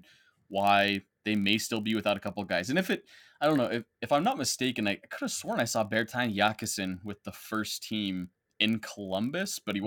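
Block size mismatch (padded) runs throughout the speech: each block arrives slightly short and is zero-filled, leaving a tiny gap that produces a steady 43.1 Hz buzz, which fits a 1024-sample read block. Playback runs at 0.999 speed, with pitch essentially unchanged.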